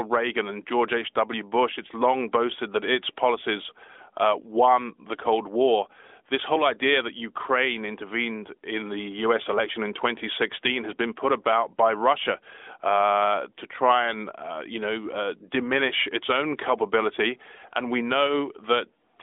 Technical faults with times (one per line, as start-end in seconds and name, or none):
none